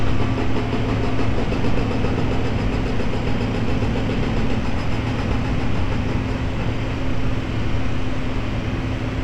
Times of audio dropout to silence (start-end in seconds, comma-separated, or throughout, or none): none